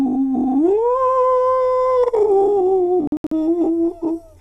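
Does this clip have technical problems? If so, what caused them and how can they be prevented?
Yes. A digital broadcast dropout from 3.07 to 3.32 s: the receiver muted for failed frames, leaving short silent holes, longest 72 ms, seen as blank vertical gaps. A stronger signal, better antenna placement or stronger error correction would prevent it.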